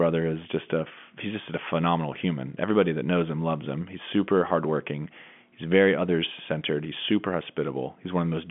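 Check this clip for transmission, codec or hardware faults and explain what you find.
Nothing here counts as a fault: the speech carries the ordinary narrow sound of G.711 telephone coding, with the line band running from about 150 Hz to 3.4 kHz and nothing at all above 3.7 kHz.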